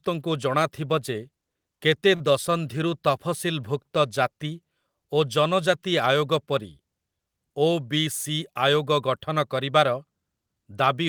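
At 2.15 to 2.31 s, a short stall from a late packet: the jitter buffer ran dry, so about 47 ms of sound is held and stretched, nothing lost.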